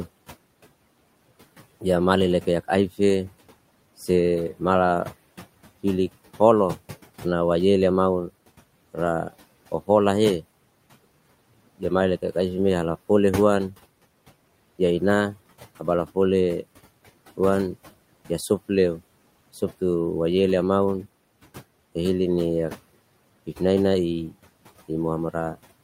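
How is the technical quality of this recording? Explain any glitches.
The recording has one audible problem, present for the whole speech clip: noise suppressor artifacts. From start to finish, the background room noise drops away in the pauses and comes back up underneath each phrase, so the noise floor pumps with the speech. The cause is a noise suppressor that works frame by frame. It cuts the bands it judges to be steady noise by about 17 dB when no one is talking, then lets them through again when speech covers them. The room noise itself sits about 20 dB below the speech.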